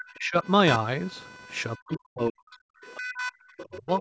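Computer activity noise runs through the whole recording: a buzzing, chirping texture pulsing at around 500 times a second and sitting only about 10 dB below the speech. Changing load on the processor, graphics card or mouse shifts the ground that the audio circuit shares with them, and that disturbance rides into the signal. It rises and falls with the machine's activity rather than with the talker, so it never settles into a steady hum.

Speech suppressed in double talk appears from the start to 0.46 s, then from 1.77 to 2.67 s, 2.97 to 3.32 s, and 3.68 s to the end. In each span the talker's voice dips sharply, by roughly 30 to 40 dB at its deepest. The deepest and longest dip is in the middle span. This is likely an echo canceller meeting both sides talking at once: unable to separate its own talker from the loudspeaker echo, it turned both down.

The other side's voice leaking through shows up from 3.58 to 3.78 s. 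A faint second voice, about 20 dB below the speech, slips into the microphone signal. Here the talker's device likely plays the far end on a loudspeaker, and the echo canceller failed to remove all of it. The residue is brief, and it runs into the final suppression dip that begins at 3.68 s.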